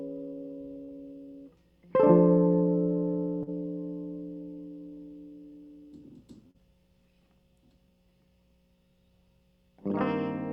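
At 0.83 to 0.91 s the music has a burst of packet loss. About 40 ms never arrived, so the receiver extended the preceding sound for 51 ms while fading it. It then resumed ahead, dropping 14 ms, so the sound jumps.

Short concealed packet loss follows at 3.43 to 3.50 s and again at 6.51 to 6.57 s. Each time 40 ms went missing and was patched with a synthesised continuation of 37 ms and 34 ms. Both are brief smears in the music.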